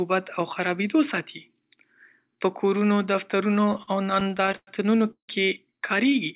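Right after "په کورونو", from 3.56 to 4.69 s, the speech falls into repeated stalls, a proper stutter. Packets kept turning up late, so the jitter buffer ran dry well over a dozen times, and each time the receiver stretched the last bit of sound to cover the wait. About 287 ms gets padded that way, roughly a quarter of the stretch, with the longest hold 100 ms. Nothing is actually lost; it just drags and hiccups along.

Then from 5.11 to 5.30 s there's a short call audio freeze. The sound hangs on itself for 174 ms, fading out to near silence for about 100 ms of that, before carrying on from where it stopped. Likely the packets got held up in transit long enough to empty the buffer. No audio goes missing, but a gap is pushed into the flow. All of this sits on narrowband audio with nothing above 4 kHz.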